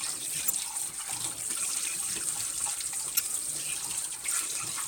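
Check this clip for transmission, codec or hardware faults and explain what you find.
Two brief faults of one kind, damaged data in a compressed stream, at 0.43 to 0.50 s and 3.12 to 3.21 s. Each is a short glitch of about 70 to 80 ms. Corrupted bytes made the decoder misread frames, lose sync and hunt for the next valid frame header.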